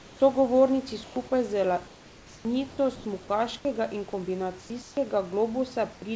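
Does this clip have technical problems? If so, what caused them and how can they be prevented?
Yes. In the pauses at 0.0–0.2, 1.04–1.16, 1.88–2.45, 2.69–2.78, 2.96–3.05, 4.61–4.70, 4.82–4.97 and 5.93–6.02 s, the room background turns steady and featureless. It is usually about 1 to 4 dB quieter and once slightly louder. This is likely comfort noise in place of the background: the sender stops transmitting when its voice detector hears silence, and the receiver fills the gap with synthetic noise. Disabling discontinuous transmission on the sending side prevents it.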